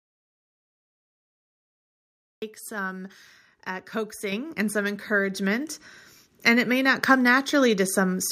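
At 4.32 s, between "some uh" and "and some", the speech jumps up in level by about 6 dB in a single step. This is a microphone volume step-up: the call software judged the input too quiet and raised the device's input volume at once. The background rises with the speech, because the whole signal ahead of any processing was boosted. A second step of about 4 dB follows at 5.34 s, just after "and some". On a waveform each shows as a sudden, sustained widening of the envelope, and on a spectrogram as a vertical edge where every band brightens together.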